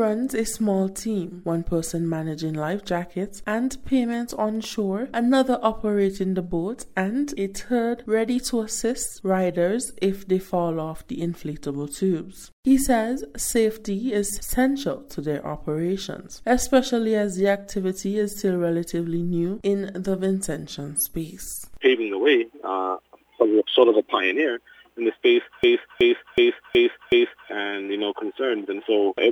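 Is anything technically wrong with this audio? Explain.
Yes. From 25.64 s to 27.49 s there is a system hang loop. The host or driver stalled while the audio hardware kept replaying its ring buffer, so a single 0.37 s slice of sound repeats exactly five times at about 2.69 Hz. The loop length fits a 16384-sample buffer. At this buffer size the result is a slow, mechanical stutter rather than a buzz, and roughly two seconds of the real audio are missing in its place.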